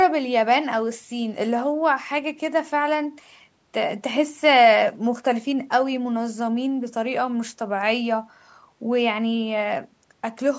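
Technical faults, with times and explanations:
Nothing stood out on listening to this speech beyond the expected shaping of call microphone processing, which trims the lowest bass and leaves nothing above 8 kHz.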